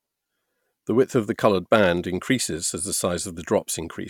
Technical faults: none

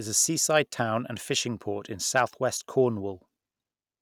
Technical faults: hard clipping

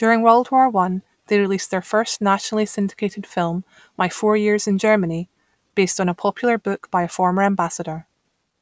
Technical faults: none

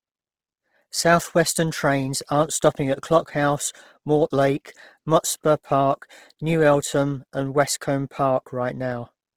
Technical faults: Opus compression

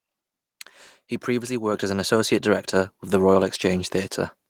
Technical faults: microphone volume stepped up

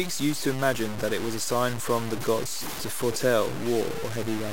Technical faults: low bit depth without dither

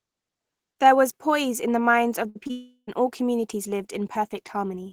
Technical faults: burst of packet loss; short concealed packet loss; long network dropout

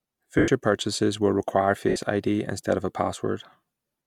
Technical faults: lost LE Audio frames

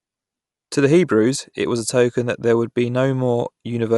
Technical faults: Dolby Digital compression

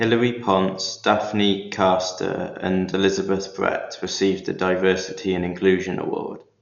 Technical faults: Dolby Digital compression

